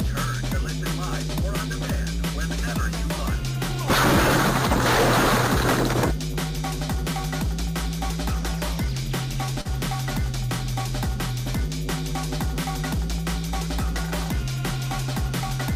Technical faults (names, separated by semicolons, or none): short concealed packet loss